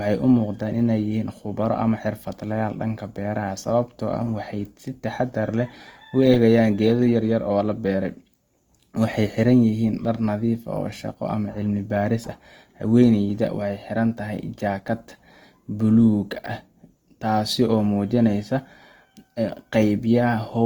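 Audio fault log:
throughout, Opus compression: the speech sounds grainy and rough, with noisy band fill instead of swirl, likely Opus music mode at about 24 kbps, still reaching 20.2 kHz.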